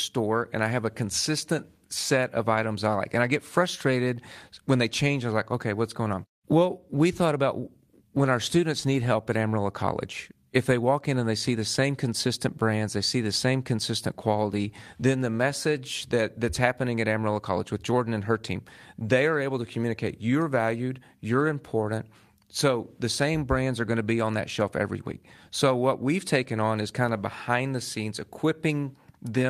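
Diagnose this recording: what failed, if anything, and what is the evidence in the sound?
Nothing failed in this recording, and there is no evidence in the sound of any fault.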